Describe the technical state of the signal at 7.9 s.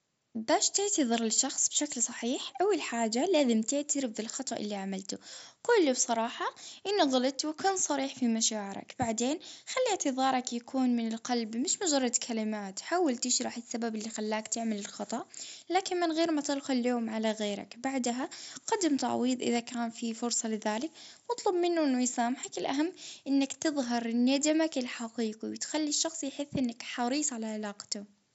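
At 7.9 s the speech is intact, carried through the Bluetooth mSBC headset codec with nothing above roughly 7.7 kHz and no fault at that moment.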